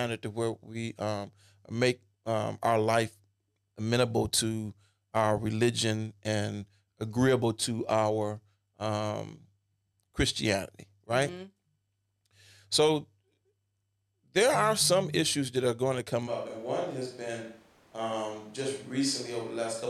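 Speech recording. At 16.29 s, after "are going to come", the sound turns suddenly roomy and hollow, thinner in bass, roughly 5 dB quieter, with more room noise, until the end. Likely a switch to a distant microphone.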